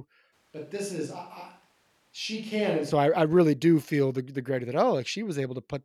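From 0.34 s to 2.9 s the close microphone's feed likely dropped out, leaving a switch to a distant microphone. The speech abruptly turns roomy and hollow, thinner in the bass, about 5 dB quieter, with faint background noise, then snaps back to close sound.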